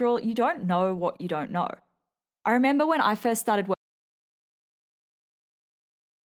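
At 3.74 s the speech cuts off mid-flow and the rest of the clip, through to its end, is dead silence, with no room tone or background left under it. This is an audio dropout to silence, likely caused by the input being lost, such as a disconnected device, a failed link or an accidental mute, while recording carried on writing silence. The light Opus compression audible before the cut is unaffected, but anything spoken after that point is gone.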